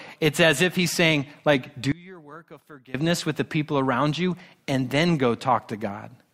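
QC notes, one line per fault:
1.92–2.95 s, one channel inverted: after "he's saying like do", the speech drops by about 23 dB to a faint trace until "with the people around". This is likely one stereo channel flipped in polarity, so the centred voice cancels when the channels sum to mono.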